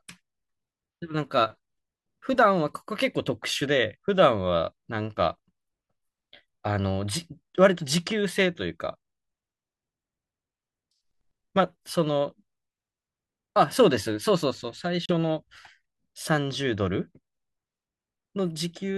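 A speech clip with one short hole at 15.05 to 15.12 s, where the audio cuts to silence and picks up further along, likely a Bluetooth dropout from a couple of late packets.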